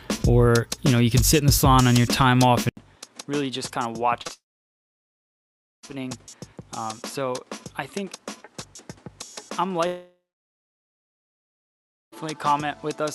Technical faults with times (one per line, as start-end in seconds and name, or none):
2.69-13.15 input switched to a poorer device
4.21-4.31 short concealed packet loss
4.33-5.85 long network dropout
9.87-12.14 long network dropout